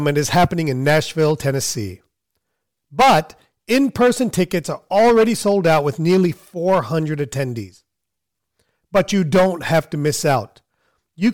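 A speech clip with hard clipping in eight spans. Peaks are cut flat at 0.07–0.45, 0.87–1.32, 3.00–3.19, 3.71–4.54, 4.95–6.26, 6.68–6.79, 8.95–10.37 and 11.24–11.29 s. The signal overdrives a stage by about 3 to 14 dB. The flattened tops add high harmonics, heard as crackle on peaks and as harsh fuzz where the overload is largest.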